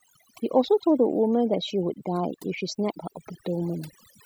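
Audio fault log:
Throughout: overdone noise removal. The denoiser's been pushed way too hard. Any frequency band sitting near its idea of the noise floor gets yanked down or muted outright, and the softer parts of the speech get caught in that net too. So the gaps between phrases drop away, with little twinkly specks popping in and out.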